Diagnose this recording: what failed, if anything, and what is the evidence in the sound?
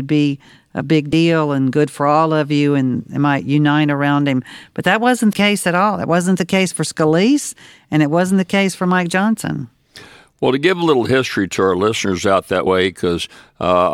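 Compressed frames skipped, a codec or storage fault: after "be a big" (1.09–1.13 s), "that wasn't" (5.32 s) and 12.66 s, audio jumps ahead roughly 20–100 ms without pausing like a dropout.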